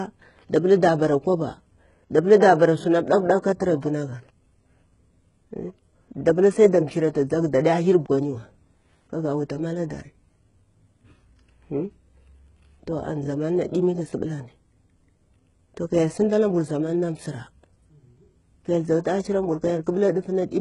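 Throughout the speech, the signal was likely squeezed through HE-AAC compression at a very low rate, consistent with roughly 12 kbps: the treble is rebuilt by copying lower bands upward. Nothing survives above 11 kHz, and s sounds come out heavily gritty, metallic and lispy.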